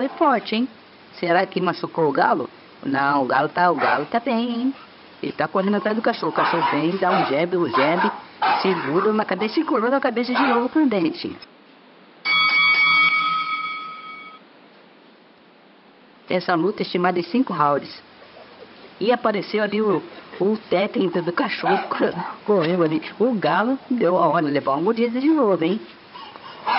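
No technical faults can be heard in the audio.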